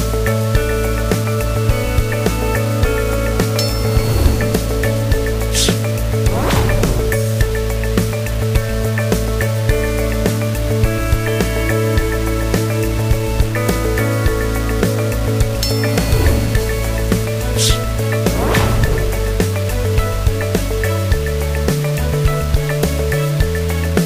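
Throughout the clip the audio carries a coarse, grainy distortion that rises and falls with the sound itself, with quiet passages turning gritty and the faintest parts sputtering or dropping to silence. This is likely low bit depth without dither: the samples were rounded to very few levels, which fits a 5-bit word, leaving error only about 15 dB below the signal. A waveform shows visible stair-stepping, and a spectrogram shows broadband hash that tracks the signal's energy rather than a steady noise floor.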